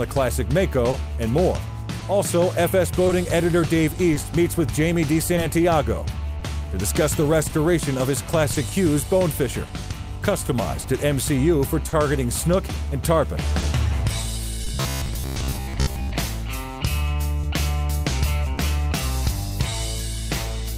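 Clock drift between sender and receiver runs through the whole clip. The sender's clock seems about 2% slow, so the jitter buffer keeps draining and the receiver stretches or repeats small pieces. You get little timing hiccups at uneven intervals from start to finish.

From 0.91 s to 19.73 s there are scattered short gaps, roughly fifteen of them, none longer than about 30 ms. Each lost or late packet was papered over by extending the last bit of sound, so the audio stays clear apart from brief ticks and smears.

Between 14.69 s and 16.13 s the sound turns into a rigid, metallic buzz at 66.8 Hz that only loosely tracks the audio. That's robotic sound from repeated short buffers. Fresh data likely arrived too rarely, so a roughly 15 ms chunk got looped for most of that stretch.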